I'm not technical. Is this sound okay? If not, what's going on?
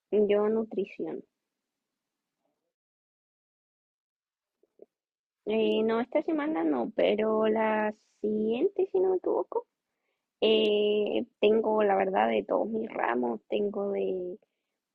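No. There is damaged data in a compressed stream at 11.99 and 14.19 seconds: corrupted bits of the file make the player lose its place, causing brief glitches in the speech.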